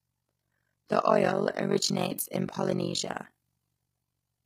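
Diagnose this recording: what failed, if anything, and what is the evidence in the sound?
Overlap-add ripple at the processing stage: the level dips by about 60 dB roughly fifty times a second throughout, a robotic flutter from unevenly rejoined frames.

At the codec stage, the speech is heavily rough and grainy throughout, with noise between harmonics and a synthetic top end. That's likely low-delay AAC compression, consistent with about 24 kbps.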